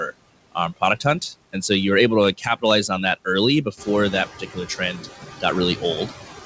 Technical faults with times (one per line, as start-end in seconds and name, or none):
0.00-6.45 noise suppressor artifacts
2.38-2.63 speech cut by the noise suppressor
4.32-4.57 speech cut by the noise suppressor